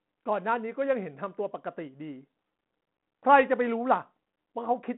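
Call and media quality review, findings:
No faults found in the speech. Telephone-band path audible as G.726 ADPCM at 32 kbit/s, passband 150 Hz to 3.4 kHz, nothing above 3.9 kHz, only the light coding grain expected at that rate.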